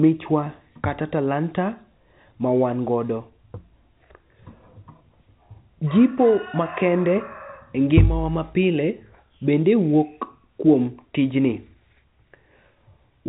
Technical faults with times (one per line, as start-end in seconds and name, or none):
none